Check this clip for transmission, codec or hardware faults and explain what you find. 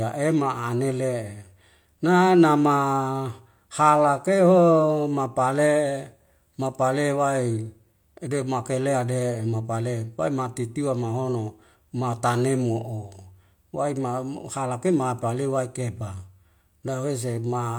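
Nothing in the speech points to a transmission, codec or hardware problem.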